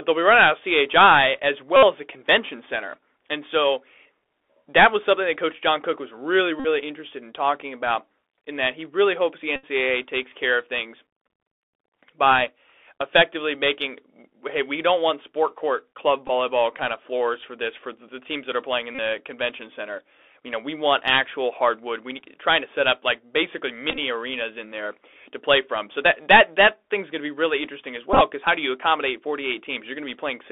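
Throughout, the speech passes through a Bluetooth CVSD headset codec at 64 kbps. Nothing above about 3.5 kHz survives, s sounds turn scratchy, and a granular hiss sits underneath. Plain band-limiting alone would leave a clean, hiss-free signal.

Bluetooth headset packet repeats occur at 1.76, 6.60, 9.56 (between "he really hopes the" and "takes care of things"), 16.28, 18.95 (before "convention center you know"), 23.90 and 28.13 s. Each covers 15 to 75 ms of missing audio with a steady buzz near 267 Hz rather than silence. At 23.90 and 28.13 s the buzz breaks into short scattered bursts.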